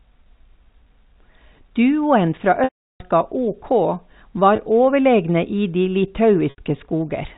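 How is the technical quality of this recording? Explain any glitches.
The recording has three dropouts from packet loss with pitch repetition, heard through telephone-band G.711 coding. At 2.64 to 3.00 s, about 360 ms goes missing. At 4.56 to 4.58 s, 20 ms is lost. At 6.50 to 6.58 s, 80 ms is lost. The gaps fit 20 ms packets. The receiver repeats the last pitch period to fill each hole and fades it out. The short gap sounds like a brief buzzy hold. The longer ones fade to silence, and the speech returns with a quick cross-fade.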